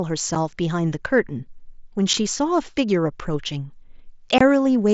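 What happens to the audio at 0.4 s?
Unconcealed Bluetooth headset packet loss occurs at about 0.35 s. A roughly 7.5 ms stretch of speech, which fits a single lost packet on the mSBC headset link, never arrived and was replaced with silence or an idle pattern rather than patched over. This leaves a brief hole with abrupt edges.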